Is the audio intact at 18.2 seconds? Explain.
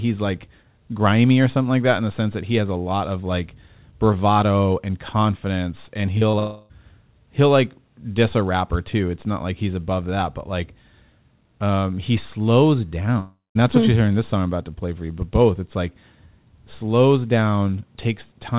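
Yes, the speech at 18.2 seconds is intact, carried through the call path with nothing above 4 kHz.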